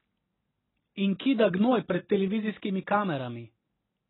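From start to finish the speech is band-limited and smeared, the signature of heavy AAC compression, likely AAC-LC at a very low rate, around 16 kbps. The encoder discards everything above 4 kHz and starves the remaining bands of bits, so sibilants turn dull and fizzy and sustained vowels warble. A spectrogram shows a flat ceiling at 4 kHz with empty space above, plus patchy, blocky gaps in the upper bands.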